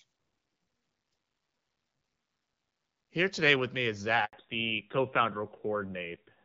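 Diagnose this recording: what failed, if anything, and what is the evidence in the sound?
At 4.25 s, right after "today with me is", the speech dies away and the line stays silent for 80 ms, until 4.33 s. This is a handover gap at the network stage: the call switched networks and no speech frames arrived in between, so that stretch of speech is lost.

From 4.33 s to the end, nothing above 4 kHz comes through, and the speech turns duller and rougher than the clear wideband sound before it. This is a fallback to narrowband at the codec stage: after the handover the call left AMR-WB HD Voice for narrowband AMR, which fits a drop from 12.65 kbit/s to 7.4 kbit/s.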